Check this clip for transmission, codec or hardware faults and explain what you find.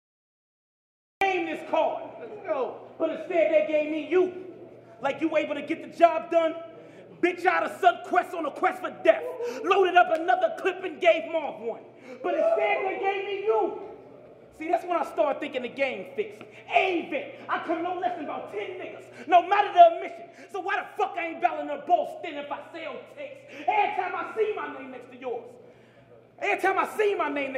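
There is one fault, a cut-off start. From 0 to 1.21 s the capture or stream had not yet begun delivering audio, so the first stretch is pure digital silence. At 1.21 s the signal switches on abruptly, partway through a sound that was already in progress. Because the opening was never recorded, there is no natural attack or fade-in. The sound simply appears at full level, mid-event, out of dead silence.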